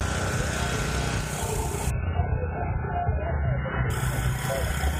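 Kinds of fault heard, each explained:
Adaptive stream at a lower bitrate: the player swapped to a far smaller encoding when the connection slowed. From 1.9 s to 3.9 s nothing above 3 kHz remains, which fits a very low-bitrate MP3, so the sound turns dull and grainy, abruptly, without any gap.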